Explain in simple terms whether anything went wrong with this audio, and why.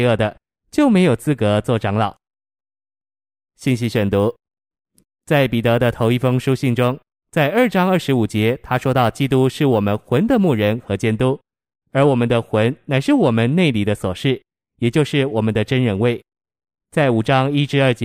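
From 2.88 to 10.85 s there is crude rate conversion: the sample rate was raised by a ratio of 1.5, likely from 32 kHz to 48 kHz, by repeating samples without filtering. This adds a gritty, unnatural fizz that follows the louder, brighter parts of the speech.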